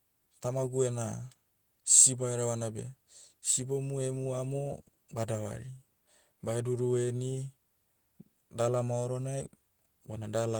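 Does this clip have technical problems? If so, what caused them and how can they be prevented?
No, nothing technical stands out in this speech recording, so there's no problem here to trace back or guard against.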